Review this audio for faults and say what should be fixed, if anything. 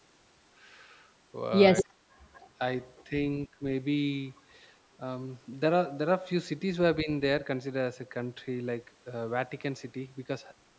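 Echo leak at 1.76–1.83 s, 2.34–2.47 s and 2.97–3.04 s: a copy of the speech returns 241 ms late, at about -10, -35 and -40 dB. It is likely an echo canceller letting loudspeaker pickup through. The fixed delay separates it from room reverb.

Speech suppressed in double talk at 1.82–2.09 s (a drop of roughly 25 dB), 3.48–3.61 s and 7.03–7.09 s (roughly 10 dB): the speech dips while both sides talk. It is a partial duck, not a clean dropout.

To prevent both, use a headset, or retune the echo canceller's adaptation and double-talk detection.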